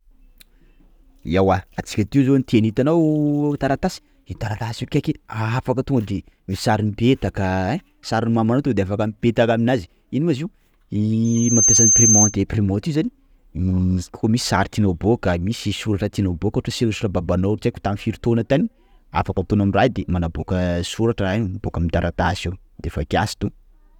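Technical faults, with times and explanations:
11.24 to 12.36 s, loudspeaker feedback squeal: a single high tone at 6.3 kHz swells out of the speech, reaching full strength within about half a second and then holding at roughly 5 dB above the speech for the rest of its 1.12 s. The microphone was picking up its own loudspeaker, and at that frequency each trip round the loop came back louder than it went in. On a spectrogram it shows as one bright horizontal line at 6.3 kHz. On the waveform it shows as a dense, widening band laid over the speech.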